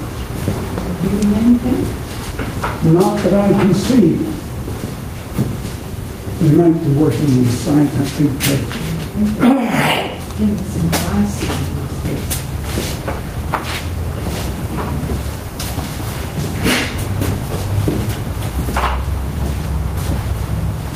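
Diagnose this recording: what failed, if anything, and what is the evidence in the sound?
Gain pumping is audible throughout the recording. The gain is pulled down each time something loud arrives, a swing of around 5 dB. This squashes loud and quiet passages toward the same level. The stage is input gain and dynamics processing. The likely cause is input gain set far too high, with a fast limiter or compressor repeatedly clamping down on peaks and releasing between them.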